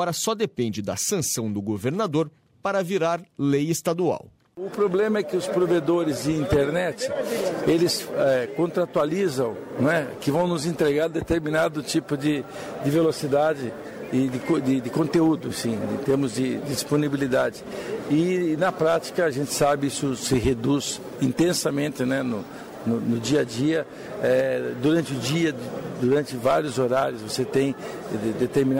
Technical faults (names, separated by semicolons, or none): none